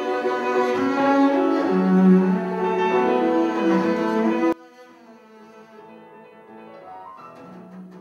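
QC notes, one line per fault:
4.53–8.01 s, one channel inverted: one stereo channel has likely flipped polarity, so when both channels are summed to mono their shared content cancels. The sound falls by about 24 dB, leaving only a faint residue of what differs between the channels.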